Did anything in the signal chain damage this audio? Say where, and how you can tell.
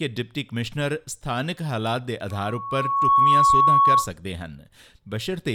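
Yes, loudspeaker feedback squeal in the acoustic loop between playback and microphone, from 2.30 to 4.11 s. A steady 1.1 kHz tone swells over about a second to roughly 10 dB above the program, showing the mic re-capturing its own loudspeaker with loop gain above unity at that frequency.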